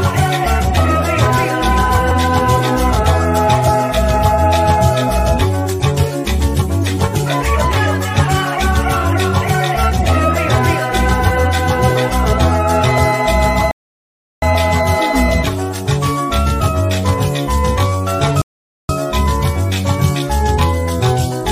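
At 13.71 s the playback hits a rebuffering stall: the player ran dry of downloaded audio and sat silent until 14.42 s, then picked up exactly where it left off. Another stall follows at 18.42 to 18.89 s, about half a second of added dead air.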